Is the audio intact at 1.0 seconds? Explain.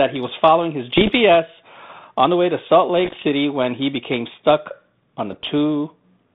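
No, at 1.0 s you're right inside a burst of bit errors on an ADPCM link, running from about 0.97 to 1.12 s. Flipped bits, somewhere under one percent, knock the decoder's step size and predictor off track, so each one rings on as pops and rough, level-jumping grit.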